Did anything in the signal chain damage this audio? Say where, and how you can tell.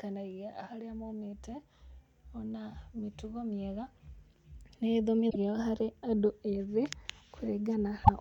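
Yes. Damaged data in a compressed stream corrupts this speech, at the storage or transmission stage, twice: from 5.27 to 5.36 s, just before "harĩ andũ ethĩ", and from 8.01 to 8.09 s. Each is a brief glitch where the decoder misreads corrupted frames and loses sync until it finds a valid header. On a spectrogram each shows as a short disruption breaking the speech harmonics; the waveform shows an abrupt discontinuity.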